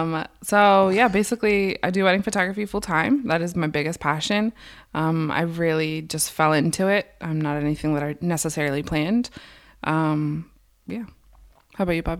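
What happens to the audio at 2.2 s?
Nothing goes wrong at 2.2 s; the speech there is intact and plays through without any audible fault.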